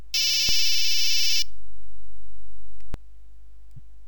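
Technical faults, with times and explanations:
0.49 to 2.94 s, DC step: the waveform's zero line jumps at 0.49 s and returns at 2.94 s, each shift heard as a low thump while the sound continues unchanged.
3.76 to 3.79 s, lost LE Audio frames: a 30 ms gap, consistent with four missing frames, where the LC3 decoder concealed the loss by repeating the last spectrum with random signs, smearing tonal content into brief noise.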